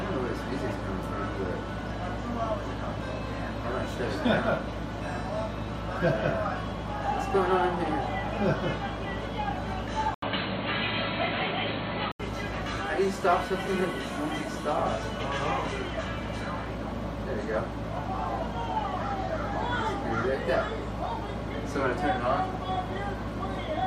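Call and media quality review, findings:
Band narrows abruptly at 10.14 s, preceded by an 80 ms dropout. Nothing audible above 4.4 kHz until 12.20 s, then full band returns. Level unchanged. A new noise floor appears, roughly 50 dB under the signal. Probable component: capture path. Likely cause is input switched to a poorer device, such as a headset call profile or a second microphone, for about 2 s. The narrower, boxier tone and the changed background both come from the substitute device.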